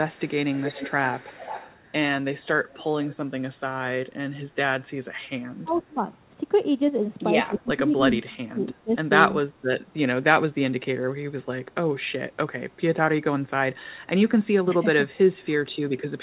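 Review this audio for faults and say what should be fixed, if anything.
Echo leak appears at 0.11–1.8 s, 2.73–3.17 s, 5.73–5.82 s and 15.40–15.46 s as a copy of the speech trailing it by 270 ms. It is strongest in the first stretch, about 10 dB below the speech, then about 25 dB and finally about 40 dB down. The far end's echo canceller likely let some of its loudspeaker pickup through. A fixed 270 ms lag separates this from room reverberation, which decays smoothly instead. Prevent it with better acoustic echo cancellation, or a headset at the far end.

Speech suppressed in double talk occurs at 5.63–6.03 s, 7.48–8.92 s and 9.42–9.49 s. During these spans the talker's level drops in pieces. The drop is about 15 dB in the short dips and about 25 dB in the longest one, where roughly a second of speech is affected. The likely cause is the echo canceller failing to tell the local talker from returning echo while both sides spoke, so it attenuated everything. 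These dips line up with overlapping talk, which separates them from packet loss, whose gaps are abrupt and unrelated to the other side speaking. Prevent it with a canceller that handles double talk better, or with less loudspeaker coupling.

The narrowband sound, with nothing above 4 kHz, matches a G.711 call at 64 kbps and is not a fault.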